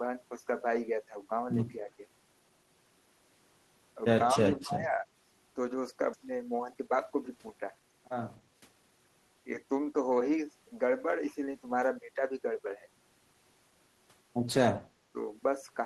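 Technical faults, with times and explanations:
1.80–1.99 s and 4.34–5.04 s, speech suppressed in double talk: the level dips by about 5 dB in the first spot, then up to about 15 dB across roughly half a second in the second. Likely an echo canceller ducking the talker while the far side spoke over them.
6.13–6.15 s, skip ahead: playback jumps straight forward with no filler, losing roughly 0.7 seconds of speech. A stretch of audio was dropped while later audio was already waiting, so the two sides of the gap butt almost directly together.
6.26–9.06 s, jitter buffer speed-up: speech runs at about 112% speed with unchanged pitch, so it sounds a bit rushed. The receiver kept trimming short pitch-period slices to work off excess buffered delay, removing around 300 ms in total.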